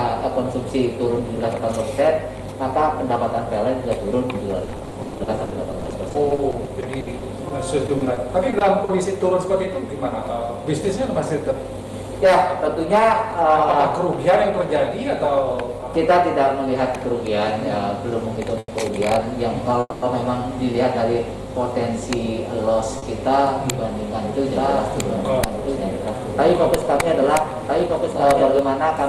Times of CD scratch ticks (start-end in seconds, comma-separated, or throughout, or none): none